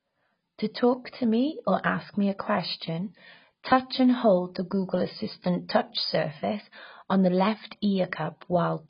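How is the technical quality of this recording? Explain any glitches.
The technical quality is poor, with heavy codec damage across the whole recording. The speech has likely been passed through AAC compression at a very low bitrate, which fits AAC-LC at around 16 kbps. Starved of bits, the encoder drops everything above 5 kHz and quantises the remaining frequency bands so coarsely that parts of the spectrum are lost or smeared. The result is a dull, muffled voice with a warbling, fizzy texture on sustained sounds and sibilants.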